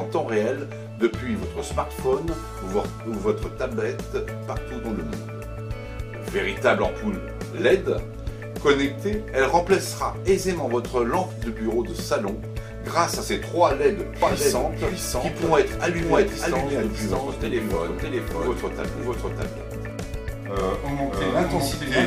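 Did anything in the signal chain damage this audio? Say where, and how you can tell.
Yes. A doubled audio track runs from 14.22 s to the end. An equally loud copy trails roughly 0.7 s behind and starts abruptly, with none of an echo's decay. This is likely a slower second capture path or a misaligned edit.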